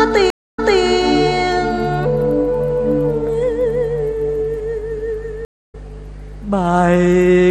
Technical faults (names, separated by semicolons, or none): stream reconnect